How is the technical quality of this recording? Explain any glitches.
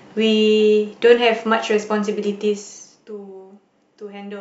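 Nothing here calls for comment: the speech recording comes across without any glitches worth pointing out.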